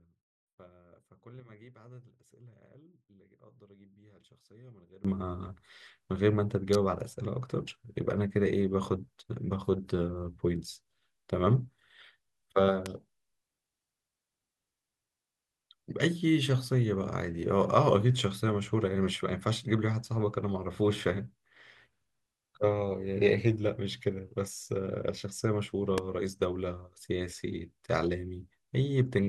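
A speech recording with two faults. For the first 5.05 s, the sound is about 25 dB quieter. One stereo channel is likely inverted in polarity, so the shared centre cancels when the channels are summed to mono. Only a faint difference signal remains. Three electrical switching spikes follow: at 6.73 to 6.75 s, at 12.86 s and at 25.98 s. Each is a sharp snap or tight cluster of clicks sitting on top of the speech. The likely cause is a nearby switch or static discharge arcing into the audio line.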